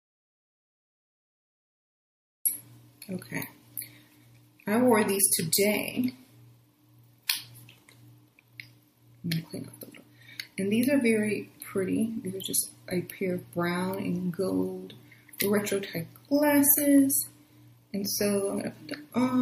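The audio opens in dead silence that is already under way at the start and lasts until 2.46 s, when sound suddenly begins mid-flow. The gap has no room tone at all. This audio dropout to silence most likely came from the input being lost, through a disconnected device, a failed link or a mute, while recording carried on writing empty samples. Whatever occurred before 2.46 s is missing. Later, from 7.27 to 7.29 s, a sharp attack is preceded by a brief smear of hiss about 22 ms long, sitting about 19 dB above the quiet just before it, and the transient itself sounds softened. This is pre-echo. The codec's quantisation noise, sized for the loud attack, spread back through its whole transform block into the near-silent moment ahead of it. The spread fits a window of around 36 ms, and the absence of any tighter containment suggests the encoder never switched to short blocks for the transient.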